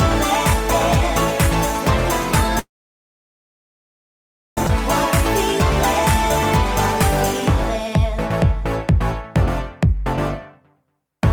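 From 2.59 to 4.58 s the audio stalls: the last sound carries on briefly, then about 1.9 s of silence follows, a flat gap in the waveform and a blank band on a spectrogram. It is a call audio freeze, likely from delayed packets draining the jitter buffer. At 4.67 s a skip ahead drops roughly two seconds of audio, and the two sides are butted together. The waveform shows an abrupt splice, and the spectrogram shows a hard vertical seam where the content changes. At 4.68 s, short concealed packet loss patches about 10 ms with extrapolated sound, heard as a tiny smear or wobble. It appears as a thin, slightly blurred vertical sliver on the spectrogram.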